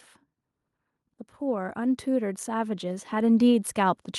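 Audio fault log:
1.08 to 4.18 s, automatic gain rising: from about a second in, the level starts creeping up and keeps climbing right to the end of the clip. The automatic gain control decided the input was too quiet and began turning itself up. Because it's a slow ramp over three seconds rather than a jump, you hear the speech and the room noise behind it swell together, which is the giveaway that it's gain and not the talker getting louder.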